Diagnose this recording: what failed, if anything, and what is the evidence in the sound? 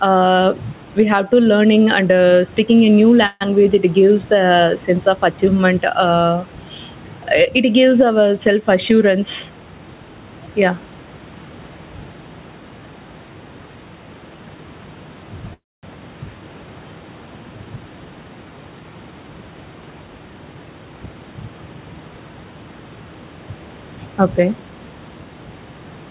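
The microphone input gain is likely set far too high, with a fast limiter or compressor pulling it back on every loud syllable. This gain pumping runs through the whole speech clip: the gain swings by around 10 dB, bringing loud and soft parts closer in level and leaving the level squashed.

Delayed network packets emptied the jitter buffer twice, probably a call audio freeze. From 3.26 to 3.43 s the last sound is stretched into a fading buzz or hiss for 145 ms, with about 30 ms of near-silence. From 15.53 to 15.85 s the fill lasts 294 ms, mostly silence (240 ms). Speech then resumes where it stopped, with nothing lost.

Twice the jitter buffer held too much audio, and the receiver trimmed short pitch-period pieces to catch up. This jitter buffer speed-up makes speech run faster at unchanged pitch: 113% from 9.15 to 10.25 s and 111% from 17.76 to 18.81 s, each dropping about 150 ms and sounding hurried.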